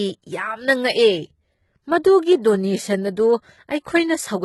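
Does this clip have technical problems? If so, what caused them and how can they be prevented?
Yes. Throughout the speech the treble sounds bright but synthetic, with gritty, lispy s sounds and nothing above 11.8 kHz. This is likely heavy HE-AAC compression, whose band replication copies lower bands upward, which fits roughly 16 kbps. A plain low-pass would sound dull rather than metallic. Encoding at a higher bitrate, or with plain AAC, prevents it.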